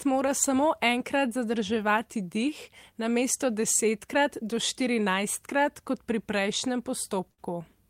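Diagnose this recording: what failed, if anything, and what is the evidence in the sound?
The network stage failed briefly: a burst of packet loss hits the speech at 7.31 to 7.40 s, right after "štirinajstkrat kot pri prejšnjem". For about 63 ms the receiver's concealment extends the last received sound, which decays as a held, fading tail instead of continuing naturally. Speech then picks up further along, with roughly 60 ms of the original audio gone. This pattern fits several consecutive packets arriving too late or not at all.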